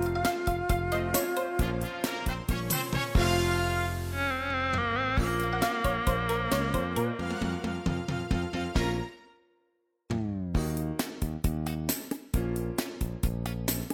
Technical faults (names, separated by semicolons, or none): digital radio blending to analogue